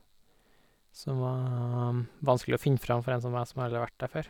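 No technical faults are audible.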